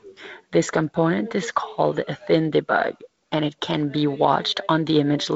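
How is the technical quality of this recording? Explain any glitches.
No glitches or faults can be heard anywhere in the recording. The speech carries the mark of G.722 wideband telephone coding, with nothing above about 7.7 kHz and a light grain in both bands that fits its 48 kbit/s mode.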